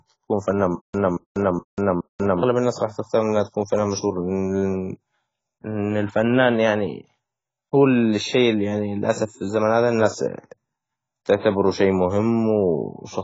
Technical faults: AAC compression; stutter with silent gaps

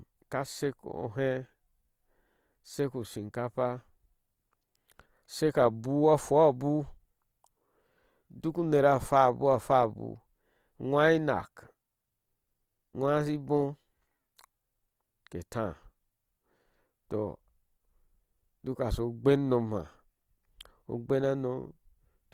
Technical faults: Opus compression

